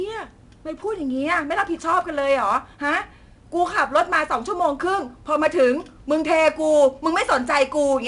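Speech, carrying plainly audible 4-bit ADPCM compression for the whole clip. Each sample is coded as a coarse 4-bit step from a predicted value, so there's a gritty hiss that rides up and down with the voice, loudest on the strong syllables, plus some roughness on sharp onsets where the step size can't keep up. Nothing sits above about 10.7 kHz, which dulls the top and fits a bitrate of around 89 kbps.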